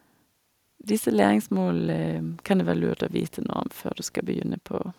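From 2.09 s to 4.52 s, video or display buzz sits under the speech: a hard 60 Hz buzz with a layer of hash above it, around 35 dB below the speech. A screen or video cable is coupling its field-rate energy into the audio path. The picture refreshes sixty times a second, and each refresh pulse leaks in as a sharp-edged spike, so the interference sounds raspy and harmonic-rich rather than like a smooth hum.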